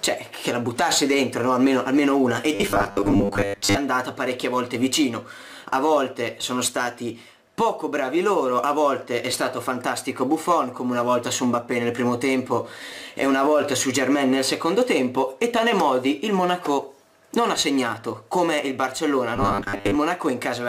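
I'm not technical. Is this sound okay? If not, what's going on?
No. New audio likely arrived too slowly, so the system kept replaying its last tiny slice, about 10 ms long. That causes robotic sound from repeated short buffers, a stiff metallic 100 Hz buzz, from 2.55 to 3.77 s (mostly repeats) and 19.36 to 19.96 s (about half).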